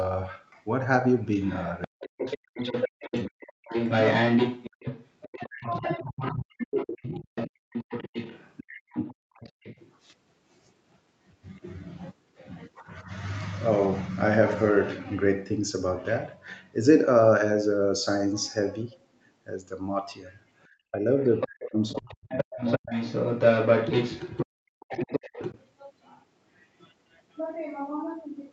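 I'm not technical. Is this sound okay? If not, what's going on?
No, it isn't. There are three problems.

From 1.22 to 9.92 s and again from 21.4 to 25.61 s, a second voice comes through about as loud as the main talker. That's the other side's voice leaking through, likely because their audio played from a loudspeaker and got picked up again by the microphone.

The main voice also keeps dipping or breaking up at 1.87–3.73 s, 5.25–7.59 s, 8.8–8.97 s, 20.91–22.9 s and 24.45–25.39 s. That's speech suppressed in double talk: with both people talking at once, the echo canceller likely couldn't tell them apart and turned everything down.

Finally, at 9.25–9.34 s the room sound briefly drops out almost completely. That's background gated by the echo canceller, which clamped the microphone down hard while the loudspeaker was playing, then let go a moment later.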